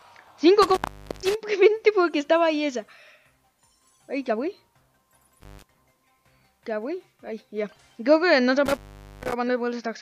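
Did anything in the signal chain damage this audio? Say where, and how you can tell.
Yes, intermittent contact in the analogue wiring. The sound drops out with crackle at each edge, around 0.62–1.35 s, 5.41–5.63 s and 8.66–9.33 s, for gaps of roughly 460, 140 and 450 ms. A loose plug or cable briefly opens, leaving faint hiss.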